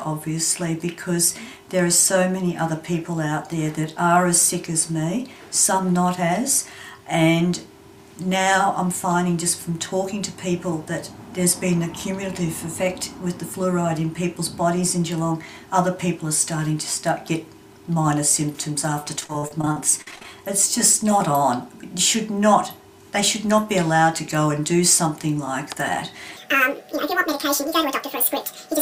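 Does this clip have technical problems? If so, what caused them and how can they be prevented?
Yes. From 19.20 to 20.25 s there is repeated packet loss, heard as robotic sound: fourteen short holes, none longer than 46 ms, patched by stretching the previous sound, so it turns choppy rather than simply silent. A steadier network path and a deeper jitter buffer would prevent this.

From 26.37 s to the end, a section plays at the wrong speed, 1.9 times too fast, with pitch raised about ten semitones. Unlike pitch shifting, tempo and pitch rise together. The likely cause is a clock or sample-rate mismatch in playback or editing, so checking that sample rates match throughout the chain would prevent it.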